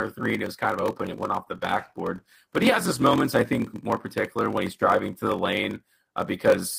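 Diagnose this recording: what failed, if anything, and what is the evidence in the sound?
The fault sits in the driver or buffer stage: a block size mismatch (padded) running through the whole recording. A steady buzz at about 43.1 Hz underlies the speech, and everything runs at about 0.938 times normal speed while the pitch stays natural. That fits a stage reading 1024-sample blocks that are only about 960 samples full, with zeros filling the rest. A sample-rate mismatch would shift the pitch along with the tempo, and it would not add a buzz.

In the call processing and codec stage, there is a call bitrate drop from 1.03 s, just after "it was kind of", to 3.27 s, ending before "I think more particular". The encoder was pushed from 32 kbps down to 17 kbps and stayed at the lowest rate for about 2.18 s. The coarser Opus coding makes the speech rough and dulls its top end until the rate recovers. 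Packet loss would instead leave dropouts or concealment glitches; here the sound degrades continuously without gaps.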